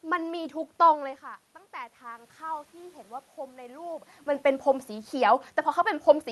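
From 1.71 to 4.13 s the automatic gain control, reacting to an input that had dropped by about 17 dB after the talker moved back, gradually raised its gain by about 5 dB. The voice climbs back over those two and a half seconds instead of staying level, and the room noise swells along with it, so the background lifts audibly as the gain rising catches up. The call path's top end stops near 12 kHz, which fits Opus.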